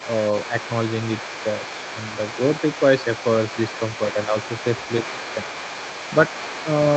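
A speech recording that came through an Opus call path, band-limited to around 8 kHz, and there's a second voice underneath it the whole way, from 0 to nearly 7 seconds. That's the other side's voice leaking through, sitting roughly 15 dB below the main talker. The likely cause is that the far end was playing out of a loudspeaker and the echo canceller didn't fully strip it from the mic, so a quieter copy rides along under everything. On top of that there are two short dips in the main talker, one around 4.15 to 4.35 s and a sharper one around 5.12 to 5.21 s. Each affects about a tenth of a second. The first drops by a few dB and the second by around 10 dB. That's speech suppressed in double talk: both sides were likely talking at once there, and the canceller, unable to tell the near talker from the echo, turned everything down for a moment.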